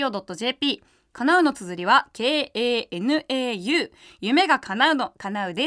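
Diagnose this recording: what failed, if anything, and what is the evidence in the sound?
Nothing in the signal chain has failed: the speech signal holds steady with no audible breaks, level jumps, added noise or distortion from any stage between capture and playback.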